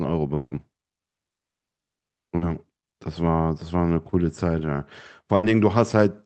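From 0.35 to 0.53 s the speech breaks off. The last sound carries on as a fading buzz or hiss for about 160 ms. Then roughly 30 ms of near silence follows. The speech resumes further on, and about 160 ms of it never returns. The likely cause is a long network dropout. No audio reached the receiver for that stretch. The receiver stretched out what it last had, then gave up.

At 2.37 to 2.43 s there is a short concealed packet loss. About 40 ms of the call arrived too late for the decoder. The receiver filled the gap by continuing the last sound and then blended back into the real speech. It is heard as a brief smear or wobble. A short consonant here can drop out.

From 5.35 to 5.45 s comes a burst of packet loss. About 80 ms of audio was lost in a row. The receiver held the last sound and turned it down as the gap went on. A voiced sound becomes a held buzz, and other sounds a fading hiss. 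The speech then picks up further on, with that piece missing. Throughout, the top end stops near 8 kHz, which fits an Opus call path at a modest bitrate.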